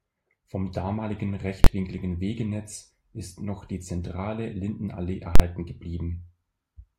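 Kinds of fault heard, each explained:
Invalid numbers at full scale: A calculation produced infinite or invalid values. These were pinned at maximum level for one processing block. The speech gives way to a loud bang at 1.64 s for 21 ms, and at 5.36 s for 43 ms. This fits 1024- and 2048-sample blocks.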